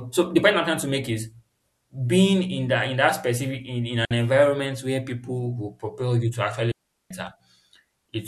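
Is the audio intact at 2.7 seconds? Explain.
Yes, at 2.7 seconds the speech plays through cleanly, with no dropout, click, distortion or other fault at that point.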